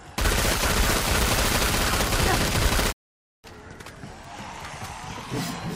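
A digital broadcast dropout at 2.91 to 3.46 s fades the sound out in about 20 ms to a flat, empty waveform and blank spectrogram band, while the receiver mutes for failed frames.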